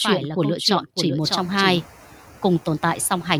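Throughout the speech, noise suppressor artifacts: frame-by-frame band gain cuts the noise by about 7 dB, and after the room noise rises around one second, residual noise dips between phrases.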